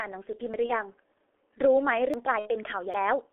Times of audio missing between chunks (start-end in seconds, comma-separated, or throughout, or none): 0.54, 2.14, 2.94